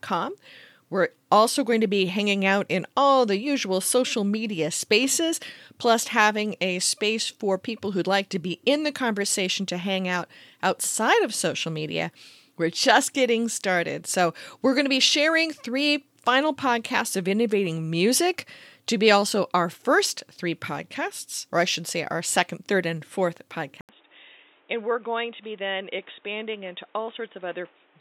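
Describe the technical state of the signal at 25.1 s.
At 25.1 s the sound sits inside a likely input switched to a poorer device, running from 23.81 s to the end. An 80 ms gap precedes it. Then nothing above 3.8 kHz passes, level drops roughly 10 dB, and a new noise floor appears. Those level and noise changes set it apart from a simple low-pass filter.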